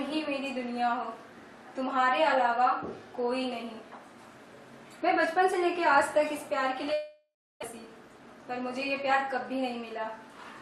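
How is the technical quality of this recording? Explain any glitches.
The recording has two connected glitches in the middle of the clip: a gap in the sound followed by a brief rush.

From 6.93 to 7.64 s the sound turns into a fading buzz or hiss, drops to silence for about 320 ms, then resumes with roughly 0.6 s of material simply missing. This is likely a long network dropout: no packets arrived, so the receiver stretched the last sound before giving up.

From 7.72 to 8.43 s the audio runs about 109% fast at unchanged pitch, sounding hurried. This is a jitter buffer speed-up: with delayed audio piling up, the receiver cut many tiny pitch-period slices, trimming around 70 ms to catch up.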